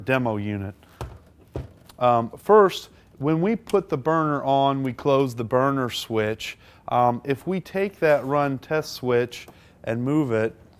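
No technical faults are audible.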